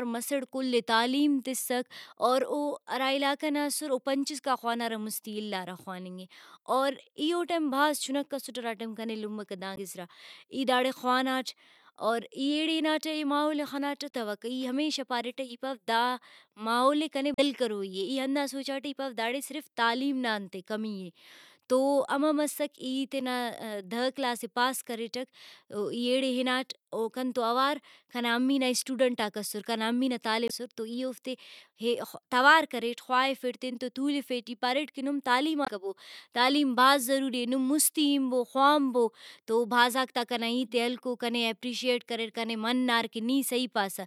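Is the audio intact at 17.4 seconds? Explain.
No. Damaged data in the compressed stream, from 17.34 to 17.39 s just after "ماحولے کنے", leaves the decoder unable to read those frames, so it loses sync and hunts for the next valid header. The speech breaks briefly into a chirp, squawk, click or short hole.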